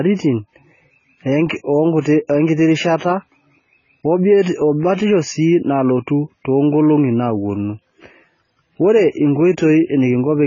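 Speech with AAC compression damage throughout, likely from AAC-LC at a very low bitrate near 16 kbps: nothing above 7 kHz, and a dull, warbling, smeared texture. A spectrogram would show a hard ceiling.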